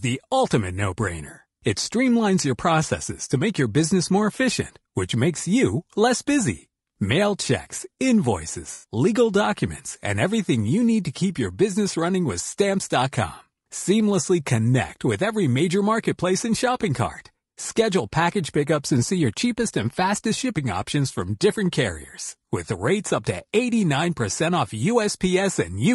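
From the start, the speech has a rough, grainy quality, with noise filling the gaps between harmonics and a thin, synthetic-sounding top band. This is likely low-delay AAC compression (AAC-ELD), whose short frames resolve pitch poorly, and the damage fits a bitrate around 32 kbps.

At 8.73 s, AAC frame loss with concealment leaves a smeared, noisy patch lasting until about 8.85 s. Roughly 100 ms of audio went missing, consistent with about five lost frames, and the decoder patched the gap by extending the last good spectrum.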